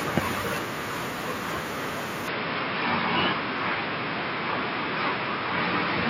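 At 2.28 s the speech abruptly turns duller and boxier and stays that way to the end. This is most likely an input switched to a poorer device: the recording moved to a narrower-band microphone path without a gap or a noticeable level jump. On a spectrogram, the upper frequencies vanish at that instant, leaving a hard ceiling. A faint new noise floor appears roughly 45 dB below the speech, while the waveform envelope looks continuous.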